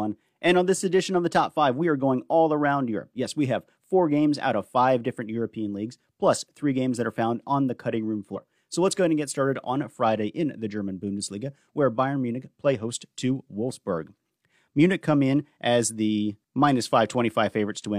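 A speech recording with one fault: damaged data in a compressed stream, heard from 8.32 to 8.38 s as a brief 60 ms disturbance. Corrupt bytes in the encoded file leave the decoder misreading those frames until it finds the next valid frame header and resynchronises. Unlike a plain dropout, which goes silent, or a single click, this comes from the decoder losing frame sync on bad data.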